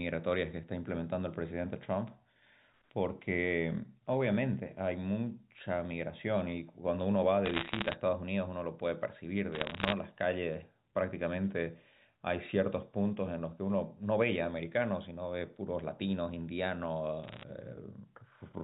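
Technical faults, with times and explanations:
7.46–7.94 s, 9.52–9.92 s and 17.24–17.43 s, bit errors on a digital phone line: three short bursts of crackle on top of otherwise intact speech. On this 8 kHz logarithmic line, which sounds like A-law, every flipped bit corrupts a single sample, and flips landing on the sign or upper bits jump the waveform into sharp ticks. The first two bursts sound denser, with just under one percent of bits hit, while the last is lighter and briefer.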